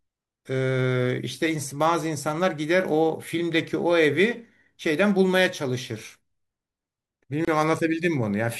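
At 7.45 s the speech drops into a gap at a join of encoded pieces, about 27 ms of silence. Untrimmed encoder padding between separately encoded pieces causes it. Speech resumes where it stopped.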